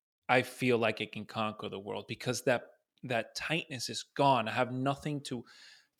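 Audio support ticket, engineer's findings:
No faults found on listen-through of the speech clip; no dropouts, glitches, distortion or timing errors detected, no action required.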